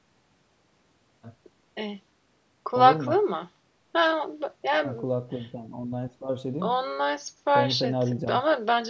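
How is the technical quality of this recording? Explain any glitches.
Nothing here counts as a glitch: there's just a little room noise sitting about 55 dB below the speech, and the call's microphone processing has trimmed off the deepest bass and left nothing above 8 kHz, which is exactly what you'd expect.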